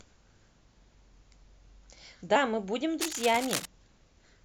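At 2.35 s the speech jumps forward: compressed frames are skipped. Roughly two whole frames never reach the output, so about 50 ms of audio is simply missing. The jump fits a frame length of about 23.2 ms. The decoder's overlapping windows cross-fade the gap, so it sounds like a brief smeared blip rather than a hard click. On the waveform the envelope shifts abruptly without a spike, and on a spectrogram the harmonic tracks break and resume slightly displaced.

From 3.00 s to 3.66 s, cable scratch noise sits over the speech as an irregular scratchy rustle, roughly 10 dB below the signal. It is likely caused by a worn cable, connector or control being moved, which makes the contact resistance flicker rapidly. On a spectrogram it shows as dense, uneven broadband speckles and thin vertical streaks. On the waveform, jagged bursts ride on top of the speech for that span.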